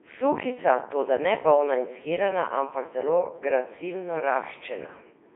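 Throughout, the speech has gone through a Codec 2 vocoder. Only pitch, voicing, energy and a rough spectral shape survive. Sine waves rebuild it, sounding robotic and buzzy. It sits within 300 Hz to 3.7 kHz. The heavy damage fits its 3.2 kbit/s mode.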